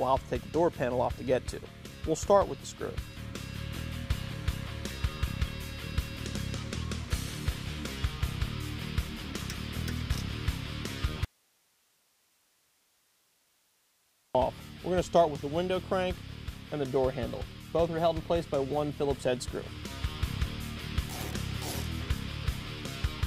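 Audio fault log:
11.25 to 14.35 s, audio dropout to a faint residue: the sound cuts out abruptly for about 3.1 s, leaving only hiss roughly 40 dB down, then returns. Likely the wanted signal was lost while the downstream path stayed live, passing its noise floor.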